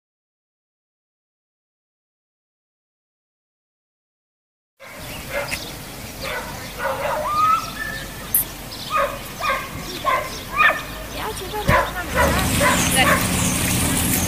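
From 2.6 s to the end, pre-emphasis is left on: a treble boost fitting a 75 µs FM curve misses its matching cut, leaving 10 kHz about 14 dB above 1 kHz, so the sound turns thin and bright.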